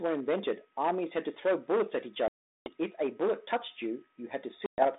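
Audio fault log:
Throughout: hard clipping, harsh crackle and fuzz on louder speech peaks, as the signal is driven about 11 dB past the ceiling and a small share of peaks flattened.
2.28 to 2.70 s and 4.66 to 4.85 s: packet loss on an ADPCM call, abrupt silent holes of 380 ms and 120 ms, then speech resumes slightly distorted while the G.726 decoder's predictor resynchronises.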